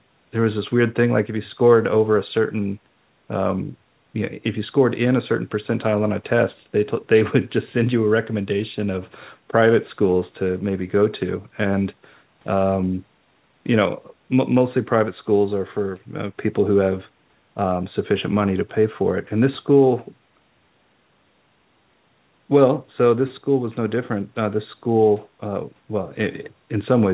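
No technical faults can be heard in this speech.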